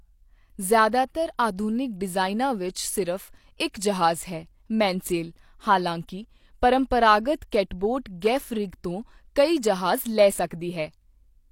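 A speech clip with pre-echo at 6.07 s, just before "ਪਰੰਪਰਾਗਤ ਕੈਟਬੋਟ ਗੈਫ ਰਿਗ", and at 7.51 s, before "ਕੈਟਬੋਟ ਗੈਫ ਰਿਗ ਤੋਂ". Block-spread codec noise leaks into the quiet gap, giving a brief hiss of 14–17 ms that arrives before each attack, unlike reverb or echo, which trail after it.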